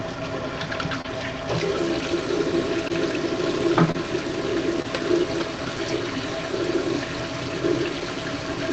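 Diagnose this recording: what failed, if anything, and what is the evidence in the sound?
Network stage: short concealed packet loss. Brief smears at 1.01, 2.88, 3.91 and 4.82 s. Each fits one late 20 ms frame, patched by extending the preceding sound.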